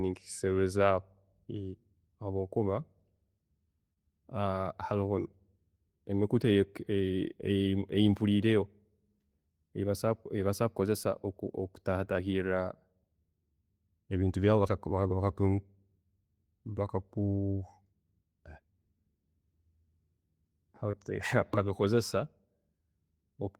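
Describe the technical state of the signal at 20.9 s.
At 20.91 to 20.95 s the speech shows a short concealed packet loss: about 20 ms of audio arrived too late to decode, and the receiver extrapolated the preceding sound across the gap before crossfading back, leaving a brief smeared, wobbly blip.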